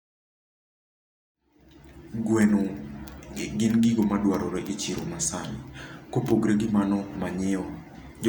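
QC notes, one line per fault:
No faults found; the speech level rises gradually from around 1.5 s to full at 2.28 s, an edited fade-in with no hard edge.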